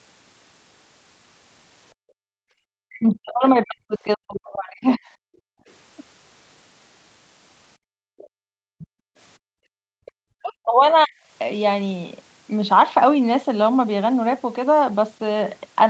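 From 1.94 to 2.62 s the echo canceller clamps the microphone while the loudspeaker plays, so the background is gated, the room sound dropping by about 37 dB before it returns.

From 2.9 to 5.04 s, and again briefly at 5.53 to 5.62 s, speech is likely suppressed in double talk: with both sides talking, the canceller turns the talker down too. The speech dips by around 40 dB over roughly two seconds, then for a short 90 ms moment.

From 7.77 to 9.77 s the background is gated by the echo canceller again, with the room sound pulled down by about 38 dB across roughly one and a half seconds of that stretch.

Within that window the other side's voice is likely leaking through, as two brief scraps at 8.18 to 8.28 s and 8.79 to 8.87 s. The canceller misses some loudspeaker sound, which comes through faint, very roughly 25 to 30 dB below the speech.

From 10.05 to 11.16 s speech is again likely suppressed in double talk. 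The canceller's ducking takes the talker down by around 40 dB over roughly 0.7 s.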